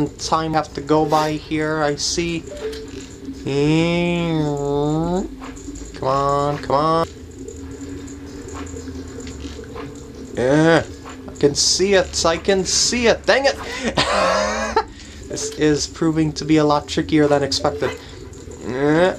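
At 0.54 s and again at 7.04 s, the compressed stream carries damaged data: a stretch of bytes in the file is wrong, so the decoder misreads or discards the frames there, loses sync, and has to hunt for the next valid frame header before it can resume. Each spot is heard as a brief chirp or blip, a short burst of garbled sound that breaks into the audio and then clears as decoding recovers.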